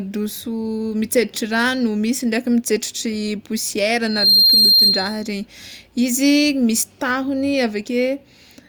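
From 4.02 to 5.30 s there is a loudspeaker feedback squeal. The microphone re-hears its own loudspeaker, and the loop runs away at 4.2 kHz. The tone swells within about a third of a second to roughly 10 dB over the speech. A spectrogram shows one bright horizontal line, and the waveform envelope balloons.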